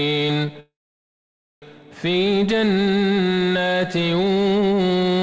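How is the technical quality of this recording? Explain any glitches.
The recording has one clear glitch, a call audio freeze from 0.60 to 1.64 s. The sound stops and is replaced by a brief fading continuation of the last sound, then about 0.9 s of silence, before resuming exactly where it left off. Nothing is lost, but everything after it arrives about a second late. The likely cause is packets stalling in transit so the jitter buffer ran dry and the receiver padded the wait. On a waveform this appears as a short decaying tail followed by a flat line. A spectrogram shows a smeared trace of the last sound, then a blank column, with the band cut off at 8 kHz from the call codec on both sides.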